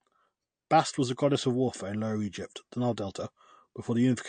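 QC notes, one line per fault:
Throughout: MP3 compression. Nothing is heard above 9 kHz, and s sounds turn watery and swirly. This is likely an MP3 encode consistent with about 48 kbps.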